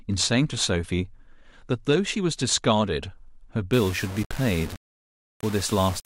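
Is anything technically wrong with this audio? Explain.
Yes. From 3.73 s to the end, the speech turns grainy and harsh, most likely from low bit depth without dither. Coarse rounding, consistent with about 5 bits, leaves error only around 15 dB below the signal. The waveform shows visible stair-steps, and the spectrogram fills with broadband hash that tracks the speech.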